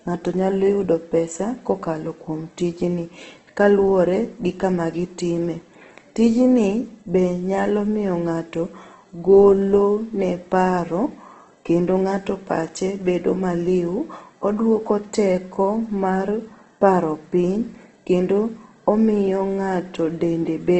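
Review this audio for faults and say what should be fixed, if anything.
Throughout the speech, the sound is grainy and rough, with a noisy texture on voiced sounds and nothing at all above 8.2 kHz. The likely cause is heavy Opus compression: the encoder keeps each band's energy but, short of bits, fills bands with folded or noise-like content, which fits a rate around 12 kbps in its CELT music mode at wideband. A spectrogram would show a hard ceiling at 8.2 kHz and smeared, speckled harmonics instead of clean lines. To prevent it, encode at a higher bitrate or switch Opus to its voice setting for speech.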